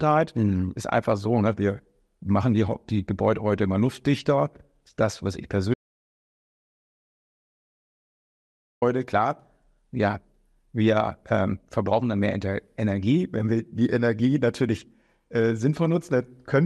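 Audio dropout to silence from 5.74 to 8.82 s: right after "luftdichter das was ich", the speech cuts off and about 3.1 s of silence follows, with no room tone, most likely because the input was lost while the recorder kept writing silence.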